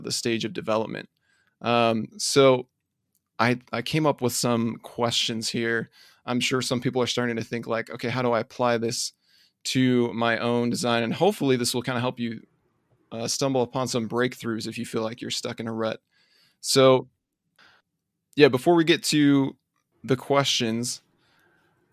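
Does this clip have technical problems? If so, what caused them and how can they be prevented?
No, the speech signal shows no technical faults at any point, so there is nothing here that needs preventing.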